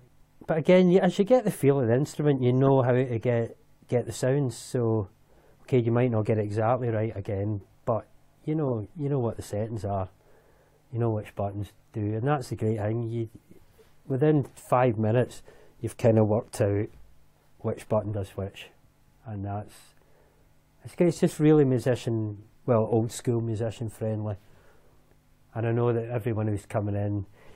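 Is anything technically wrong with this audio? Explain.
Yes. Two short glitches cut through the sound, from 2.66 to 2.69 s and from 8.67 to 8.73 s, peaking around -20 dBFS and -25 dBFS. These are corrupt frames decoded: damaged compressed data was played anyway, spraying energy into wrong frequencies for roughly two and three frames' worth of time.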